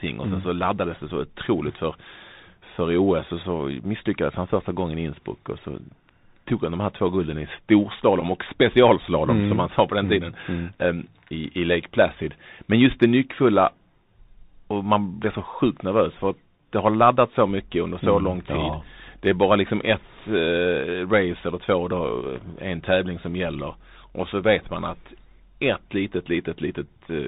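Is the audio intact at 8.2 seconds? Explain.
No. At 8.21 s, just before "och specialslalom mm som", a brief buzzy tick interrupts the audio. This is a Bluetooth headset packet repeated: about 11 ms of audio went missing, which fits three lost packets, and the headset chip replayed the last good packet's bits to fill the gap.

Around that moment, and throughout, the sound is dull and band-limited, with nothing above 4 kHz, a scratchy edge on s sounds and a granular hiss underneath. This plainly audible damage comes from the Bluetooth CVSD headset codec, which fits a 64 kbps stream. It encodes each sample as a single up-or-down bit, and its adaptive step cannot keep up with fast, loud high-frequency detail.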